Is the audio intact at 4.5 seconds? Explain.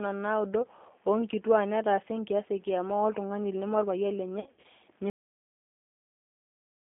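No. VoIP packet loss concealed by the speech codec runs from 4.40 to 4.66 s: about 150 ms of audio goes missing in short gaps, the longest about 60 ms, and the decoder fills each by stretching its last pitch and filter into a fading buzzy tone or coloured noise. The sound stays weak and smeared until it recovers. Throughout, the G.729 codec at 8 kbit/s rebuilds speech from a vocal tract model and sparse pulses, leaving a 200 Hz to 3.5 kHz band with an audibly rough, synthetic texture.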